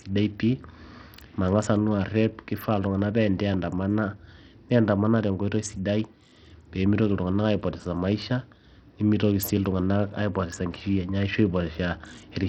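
Throughout the speech, the treble flickers and drops away under a gritty, aliased haze, likely from heavy Bluetooth SBC compression, consistent with a starved bitrate near 64 kbps.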